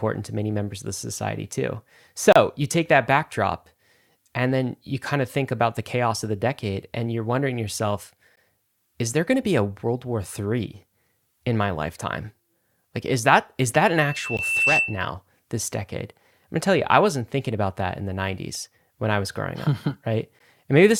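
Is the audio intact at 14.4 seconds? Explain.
No. A loudspeaker feedback squeal runs from 13.96 to 15.12 s. The microphone is picking up the loudspeaker it feeds, and at 2.7 kHz the loop gain passes one, so that frequency feeds on itself. It swells over roughly 0.7 s into a steady, piercing tone that ends up a few decibels louder than the speech and stays on top of it until it stops just after 15.1 s.

Inside that squeal there is also a gap at a join of encoded pieces at 14.37 s. The audio appears to have been encoded in separate chunks and spliced without trimming, which leaves in each encoder's start-up delay and the padding in its final frame. The result is a 16 ms dropout with smeared edges, after which the sound resumes where it stopped. The 6 s spacing of these joins points to pieces of that length.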